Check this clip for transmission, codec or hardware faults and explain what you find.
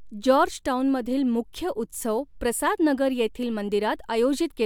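Nothing stood out on listening to this speech recording.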